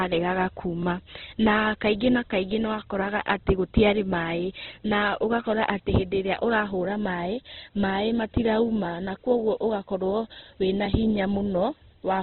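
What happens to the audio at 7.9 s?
At 7.9 s the speech carries the same damage heard through the whole clip. Nothing sounds above about 4.2 kHz, and the tone is grainy and rough. The likely cause is heavy Opus compression in its music mode, starved of bits at a rate that fits about 12 kbps.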